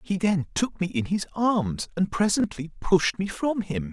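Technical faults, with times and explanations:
2.40–2.44 s, chunks out of order: inside this 40 ms stretch of speech, one 20 ms chunk of audio plays one chunk late, swapping places with the chunk that should have followed it. No sound is missing, but the two pieces run in the wrong sequence, so the waveform jumps at each of the three hard joins where mismatched edges meet. That brief scramble is heard as a tiny jumbled flicker.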